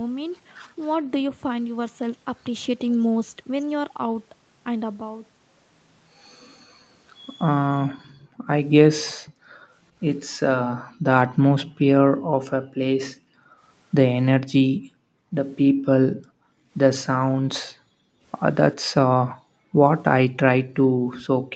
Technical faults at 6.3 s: none

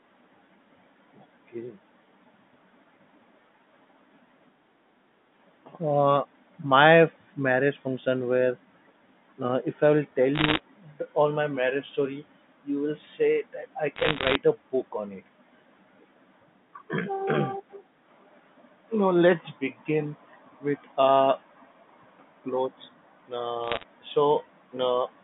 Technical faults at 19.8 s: none

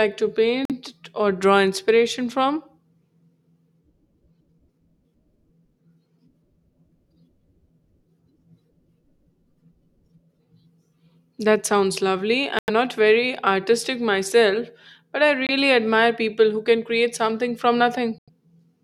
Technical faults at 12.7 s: Bluetooth dropout

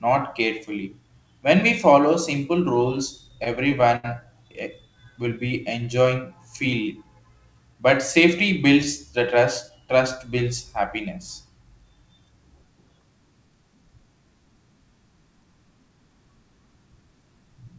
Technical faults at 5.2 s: jitter buffer slow-down

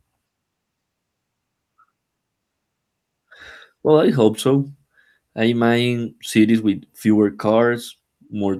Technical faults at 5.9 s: none

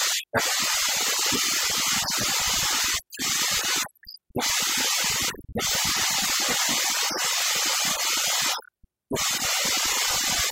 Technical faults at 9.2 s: overdone noise removal

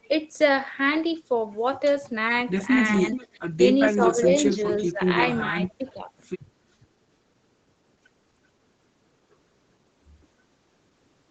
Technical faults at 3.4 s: speech suppressed in double talk

